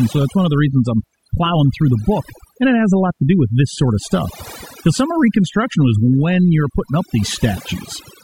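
Overdone noise removal runs through the whole speech clip. The noise reduction was set too strong. It cuts individual frequency bands whenever they sit near its noise estimate. The background drops and breaks into twinkling specks. Quiet parts of the voice vanish too.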